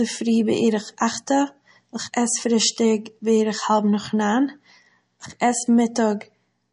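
MP3 compression runs throughout, from start to finish. The speech has no content above 10.5 kHz, a hard treble ceiling where the encoder stops spending bits, and the damage is plainly audible: a watery, swirling texture as weak frequency components blink in and out between frames, with metallic chirps on s sounds and softened consonant attacks. The likely cause is encoding with too few bits, which fits a bitrate around 40 kbps.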